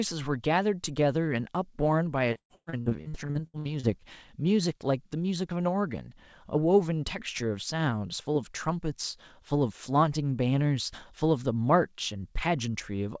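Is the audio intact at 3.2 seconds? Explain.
No. At 3.2 s the sound is inside a stretch of repeated packet loss (robotic sound) running from 2.33 to 3.86 s. More than a dozen quick holes, the longest 110 ms, are patched by stretching the previous sound, so nearly half the span is filler. Unlike a single dropout, this gives choppy sound with pieces missing rather than one clean gap.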